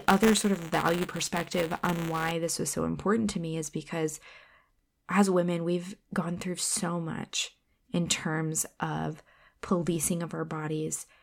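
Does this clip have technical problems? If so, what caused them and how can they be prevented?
Yes. Buffer tearing runs from 0.0 to 2.31 s, ending just before "this was so important". Writer and hardware reader cross every 5 ms, splicing in a small slice of audio about 10 ms stale, which makes a robotic 200 Hz buzz that follows the speech. Unlike an underrun, it leaves no silent gaps. Prevent it by keeping the write pointer safely ahead of the hardware read position and re-synchronising after any stall.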